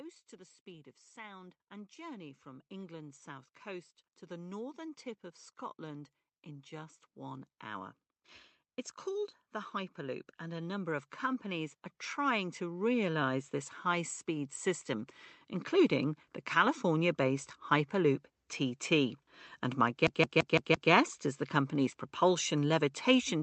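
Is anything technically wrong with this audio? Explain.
Yes, there are two kinds of fault.

Automatic gain rising occurs from 0.64 to 5.06 s, just after "to the", and again from 9.04 to 15.17 s, ending just before "including the". Each time, the gain control judged the input too quiet and raised its gain gradually, by about 7 dB and then about 10 dB. The speech and the background noise swell together over several seconds.

CD stuck on one turn occurs from 20.07 to 20.91 s. A scratch sends the laser back to the same point on each rotation, so a 169 ms fragment plays five times in quick, even succession with a brief mute at every jump. The result is the mechanical stutter of a skipping disc. Underneath it all, the call-codec path band-limits the audio to about 8 kHz.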